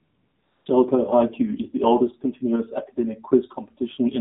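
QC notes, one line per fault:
Throughout: AMR narrowband mobile codec. Everything is squeezed through an 8 kHz sampling path, so nothing above 4 kHz gets through and the speech sounds boxed-in and phone-like. On top of that there's a plainly audible buzzy, synthetic edge, which is what you get when a vocal-tract model fed by a handful of pulses per 5 ms subframe has to carry the voice. The amount of damage points to a low mode, something like 7.4 kbps.
0.00–0.66 s: AMR comfort noise. For the first two-thirds of a second or so, the phone decided nobody was talking and sent no speech frames, so the receiving end filled that stretch with generated noise built from a rough sketch of the background's level and spectrum. That's why the opening sounds like a smooth, even hiss rather than a real room, and why it switches over abruptly once actual speech frames start arriving.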